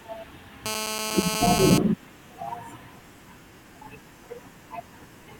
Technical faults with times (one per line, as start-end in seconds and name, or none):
0.66-1.78 GSM phone buzz